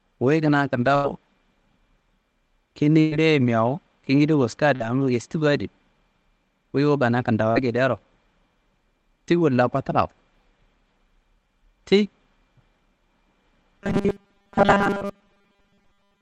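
Speech heard over a call path whose codec cuts off the highs above 8 kHz has three bursts of packet loss: 0.95 to 1.07 s after "wuyi kina", 3.00 to 3.14 s just before "mewu kingida wuska", and 4.75 to 4.83 s right after "mewu kingida wuska". In each, the receiver held and faded the last sound for 85, 115 and 45 ms, then resumed with roughly 80, 120 and 40 ms of audio gone. Short concealed packet loss at 7.52 to 7.59 s leaves a brief smear where about 40 ms went missing and was patched by extending the preceding sound. Robotic sound from repeated short buffers runs from 13.79 s to the end. A rigid 200 Hz metallic buzz follows the speech, likely because late-arriving audio was replaced by a 5 ms snippet looped over and over, skipping most of the real signal.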